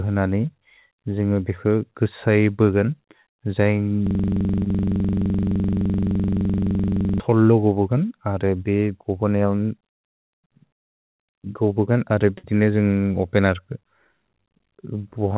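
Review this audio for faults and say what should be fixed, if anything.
From 4.07 s to 7.20 s the audio locks into a system hang loop. One 42.7 ms slice of speech repeats about 73 times, which fits a 2048-sample ring buffer that the hardware kept replaying while the driver or host was frozen. At that length the repeats blur into a rough buzz at 23.4 Hz. A loss or dropout would break off or fade, but this repeats identically and does not decay. Prevention: give the audio thread real-time priority and add a watchdog that mutes the output when the buffer stops being refilled.

At 4.64 to 4.68 s, inside the looped stretch, there is a short concealed packet loss. About 20 ms never arrived, and the receiver filled roughly 18 ms by extending the preceding sound before blending back. It is heard as a brief smear in the repeating pattern. Unlike the hang, it is a single short glitch that does not repeat. 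Prevention: use a deeper jitter buffer and enable forward error correction where the network drops isolated packets.

From 12.38 to 12.45 s a burst of packet loss removes about 60 ms. Concealment carries the last sound for about 56 ms, so it becomes a held buzz or fading hiss, and then the speech resumes further on with that stretch missing. It is longer than the single-packet dropout at 4.64 s and audibly decays, while the hang loop repeats without fading. All of this passes through a call path whose content stops at 4 kHz, which points to G.711 mu-law at 64 kbps. Prevention: add redundancy or interleaving so that consecutive packets are not lost together.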